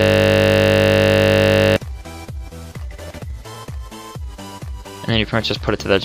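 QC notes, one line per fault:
0.00–1.76 s: system hang loop. Already under way at the start. A 20 ms slice repeats exactly, so it is heard as a steady 50 Hz buzz.
3.04–3.63 s: processor overload crackle. About fifteen tiny buffers, each under a millisecond, are skipped. Their hard-edged gaps form a gritty crackle that stops once the load passes.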